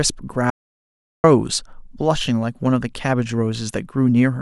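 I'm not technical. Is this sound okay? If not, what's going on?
No. From 0.50 to 1.24 s there is an audio dropout to silence: about 0.74 s of speech vanishes into dead quiet, likely from a briefly lost input connection.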